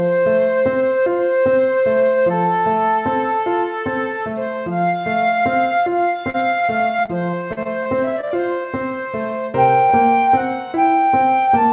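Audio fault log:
6.3–8.66 s, repeated packet loss (robotic sound): about fifteen short dropouts in quick succession, the longest around 40 ms. Each one gets patched by stretching the last bit of sound, so roughly 13% of this stretch is filler, and that's what makes it choppy and robotic.
9.9 s, short concealed packet loss: a single hole of about 20 ms that the receiver papered over by carrying the previous sound forward before blending back in. You hear a quick smear or wobble.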